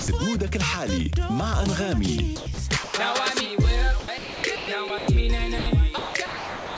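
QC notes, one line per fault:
0.00–0.08 s, sound dropped by the voice detector: the opening sound gives way to steady comfort noise for about 80 ms, likely because the sender's detector judged it background.
2.36–2.58 s, sound chopped by the voice detector: sending likely switched off and on repeatedly, so 140 ms of sound becomes comfort noise.
2.84–2.94 s, sound dropped by the voice detector: 100 ms of sound vanishes into flat synthetic noise, likely a quiet passage misread as silence, then returns.
4.00–5.08 s, sound chopped by the voice detector: a choppy stretch in which about 580 ms is swapped for comfort noise, likely from the detector toggling.
5.58–5.66 s, sound dropped by the voice detector: an 80 ms gap filled with steady noise, likely the detector pausing transmission before it triggers again.
5.98–6.78 s, sound chopped by the voice detector: through to the end, roughly 690 ms is replaced by comfort noise as sending likely cuts in and out, leaving broken sound.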